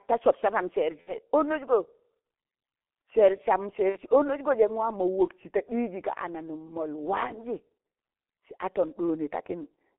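Across the whole recording the speech sounds muffled and hoarse, squeezed into a narrow band from about 250 Hz to 3.5 kHz, with smeared consonants and heavy damage. This is the G.723.1 codec at work: its 30 ms frames and slow voice model fit a 6.3 kbit/s stream.

From 1.01 to 1.14 s and again from 3.89 to 3.98 s, the speech stretches into a fading sound before recovering weakly. This is VoIP packet loss concealed by the speech codec: roughly 60 ms went missing each time, consistent with two lost frames, and the decoder extended its last pitch and filter while lowering the gain.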